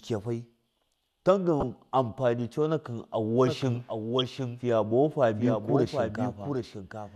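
A short, fairly loud burst of chirping noise cuts through the speech from 1.60 to 1.63 s. This is a corrupt frame decoded: flipped bits in a few consecutive compressed frames were played anyway, so misread gains and codes threw energy onto the wrong frequencies for that span.

From 3.47 s to the end, every sound returns roughly 0.7 s later as a dry, full-band repeat a few decibels quieter, with no decay or room colour, and it starts abruptly. This is a doubled audio track, likely the same audio captured again through a slower path and mixed back in.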